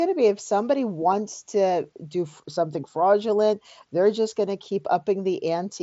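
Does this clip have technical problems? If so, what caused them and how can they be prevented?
No, this speech clip has no technical problems, so there is nothing to prevent. It comes through a Bluetooth mSBC headset link, which caps the speech at 8 kHz and adds a light grain to the louder syllables.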